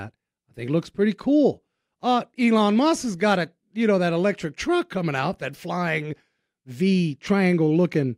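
No technical faults are audible.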